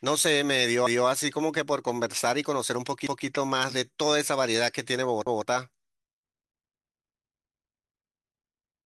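Overlapping chunks at 0.87, 3.07 and 5.27 s in this speech clip: each new 2.0 s chunk starts early, replaying 200 ms and producing a regular stutter.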